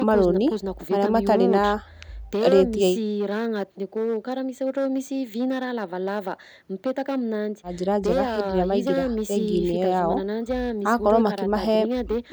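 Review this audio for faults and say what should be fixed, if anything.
Harsh crackle rides on the louder peaks of this speech from start to finish, a brittle edge added wherever the level climbs. That is hard clipping: the signal is driven about 6 dB beyond what one stage can pass, so the tops of the waveform are sliced flat, and those squared-off peaks throw extra harmonics high into the spectrum. Only a small share of the audio, around four percent, sits above the limit. Leaving enough headroom at every gain stage, with input level set so peaks stay well below full scale, prevents it.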